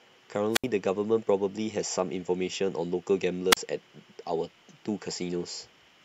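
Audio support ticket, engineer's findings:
Wireless microphone squelch dropout at 0.51–0.66 s and 3.51–3.57 s. Speech fades into brief hiss, then mutes for about 72 ms and 35 ms. RF fade at the FM receiver trips squelch. Waveform shows flat gaps; spectrogram shows broadband noise leading into blank columns.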